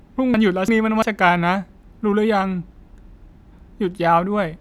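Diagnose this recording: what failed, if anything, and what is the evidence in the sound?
Between 0.34 s and 1.02 s the speech jumps and runs in the wrong order, with hard joins at 0.34, 0.68 and 1.02 s. These are chunks out of order at the driver or buffer stage: one block of about 341 ms was written a block late, so it plays after its successor.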